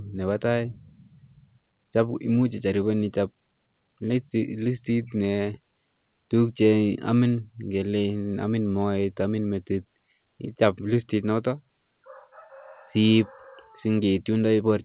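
No faults are audible in this speech; it has come through a WebRTC call path whose band stops at 4 kHz, which fits G.711 A-law at 64 kbps.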